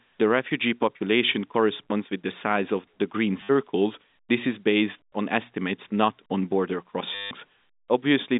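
Packets were dropped and the receiver kept replaying the last one: after "size of the green", 3.41 to 3.49 s, then after "estimates not on border", 7.15 to 7.31 s. Each gap becomes a robotic stutter buzzing near 100 Hz, which fits 10 ms packets, heard through the narrow telephone band of G.711 A-law coding.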